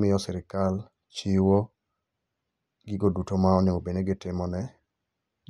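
No technical faults can be heard anywhere here.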